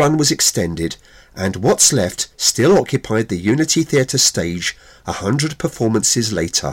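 Hard clipping runs through the whole clip. The speech reaches some stage at roughly 14 dB above what it can pass, so every peak that exceeds the ceiling is sliced flat. Only a small share of the waveform, on the order of a couple of percent, actually hits the limit. Those squared-off tops add harmonics high in the spectrum, giving the louder syllables a harsh, buzzing fuzz and a crackly edge from start to finish.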